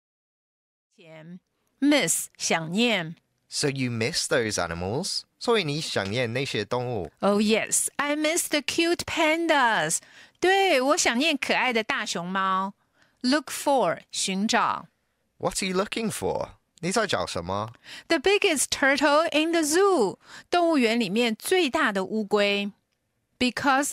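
Nothing in this speech recording points to a technical fault; the only edit you can hear is a gentle fade-in that begins at around one second and reaches full level by 1.99 s.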